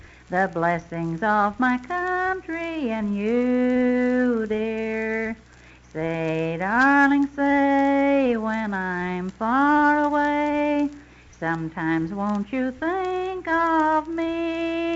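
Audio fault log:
No faults logged; the audio shows normal call microphone processing and WebRTC call path behaviour, with nothing above 8 kHz, consistent with the codec's bandwidth.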